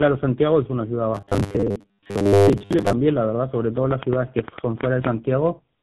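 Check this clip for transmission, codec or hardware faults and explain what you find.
Two faults are present: tandem coding across the whole clip, and a stretch of robotic buzz.

Tandem speech coding runs throughout. The speech passed through AMR-NB at 7.95 kbit/s, then G.711 mu-law, then GSM full rate at 13 kbit/s, so two lossy speech coders worked in sequence, the second re-encoding the first's damaged output. Errors compound: the speech sounds rough, muffled and warbly.

Robotic sound from repeated short buffers occurs from 1.15 to 2.93 s. Audio was likely arriving too seldom, so the playback side kept repeating a very short chunk while most of the real signal in that stretch was skipped. The buzz sits at 100 Hz, which fits repeats about 10 ms long. The speech becomes a stiff, metallic drone that only loosely tracks its own rhythm.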